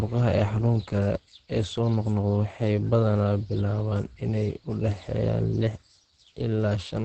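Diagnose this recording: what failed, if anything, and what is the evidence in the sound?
The codec stage failed: throughout the speech there is nothing above 8.4 kHz, and the sound is muffled and hoarse with plainly audible damage. This is likely Opus compression in its SILK speech mode at wideband, which fits a low bitrate of around 16 kbps.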